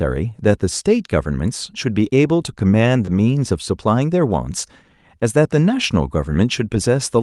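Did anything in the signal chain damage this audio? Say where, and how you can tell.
Yes. Around 3.05 to 3.09 s the speech briefly smears, a short wobble lasting only a few hundredths of a second. That is short concealed packet loss at the network stage: about 20 ms of audio, which fits one lost 20 ms frame, never arrived in time. The decoder covered the hole by extending the preceding sound, then crossfaded back into the received audio, which leaves this blurred join.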